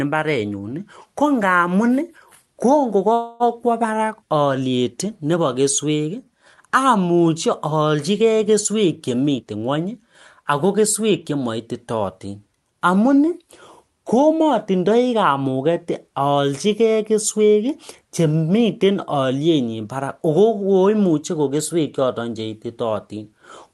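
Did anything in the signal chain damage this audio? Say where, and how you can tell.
Yes. At 3.13 to 3.43 s a call audio freeze holds the last sound as a fading buzz or hiss for about 0.27 s. Then the speech resumes where it stopped, with nothing lost. This likely comes from delayed network packets draining the jitter buffer.

From 9.36 to 12.28 s the jitter buffer speed-up shows. The speech runs about 10% fast at unchanged pitch and sounds hurried. The receiver trimmed pitch-period slices totalling roughly 300 ms to shed the built-up delay.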